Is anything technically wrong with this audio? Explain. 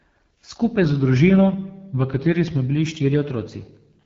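Yes, two things stand out.

The whole clip carries the sound of the AMR wideband (HD Voice) codec, and at a low rate. Nothing comes through above about 7.4 kHz, and the speech has that rough, raspy edge you get when the codec's pulse-driven vocal tract model is starved of bits. The top band is just shaped noise rather than real detail. The damage is plainly audible and fits one of the lowest AMR-WB rates, around 8.85 kbit/s.

From 0.85 s to 2.68 s the speech suddenly slows by about 5.9% and drops roughly 105 cents, a touch over a semitone, then snaps back to normal speed and pitch. Speed and pitch move together, so nothing is being time-stretched; the playback rate itself changed. That's likely a drift correction step, where clock-matching software jumped the rate in one go to refill its buffer rather than easing it gradually.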